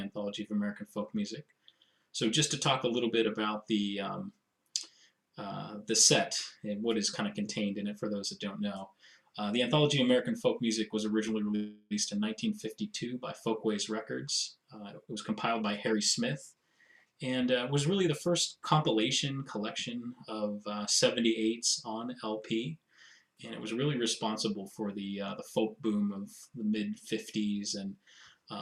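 At 11.55 s the sound stops moving forward and is held as a fading buzz or hiss until 11.93 s. This is a call audio freeze. For about 350 ms the receiver kept stretching its last sound, and it ends in a brief near-silence of about 30 ms. The likely cause is packets held up in transit, so the jitter buffer ran dry. When they arrive, the audio picks up exactly where it paused. Nothing is lost, but everything after is about 350 ms later.

From 15.06 s to 18.57 s comes a jitter buffer speed-up. The buffer now holds more audio than it targets. To cut the built-up delay, the receiver drops many short slices, each one or a few pitch periods long. The pitch stays the same, but the sound runs at about 109% speed and feels hurried. Around 300 ms is removed across this stretch.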